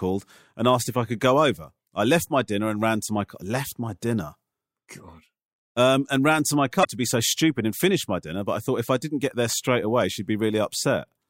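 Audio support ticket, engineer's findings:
Short glitch, 6.81–6.86 s (about 50 ms), between "and ran to my" and "to be so stupid". Damaged data in a compressed stream: corrupt bytes in one stretch of encoded frames, decoder loses sync, skips to next valid frame header. Check transport and storage path for the encoded file.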